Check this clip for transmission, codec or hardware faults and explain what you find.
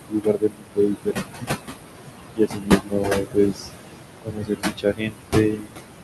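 The faults come from noise suppression working too hard against room noise that sits only about 5 dB below the speech. It removes both the noise and parts of the speech itself.

Noise suppressor artifacts are present throughout. The suppressor pulls the background down by about 21 dB in the bands it classes as steady noise, gating frame by frame. The leftover noise pumps between phrases and rises under them.

Speech cut by the noise suppressor occurs in three spans: 0.07 to 1.49 s, 2.32 to 3.69 s and 4.22 to 5.76 s. In each span, around a second of speech is misjudged as noise and attenuated by up to about 22, 20 and 22 dB respectively. Quieter consonants and word endings sound swallowed or faded.

The band limit near 12 kHz fits an Opus call path at a moderate bitrate.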